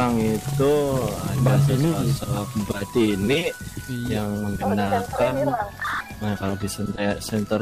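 No technical faults can be heard anywhere in this audio.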